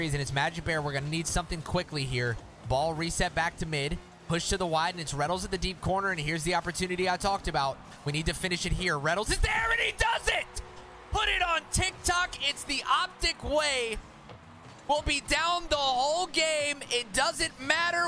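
Listening through the recording, nothing stood out as a technical problem at any point.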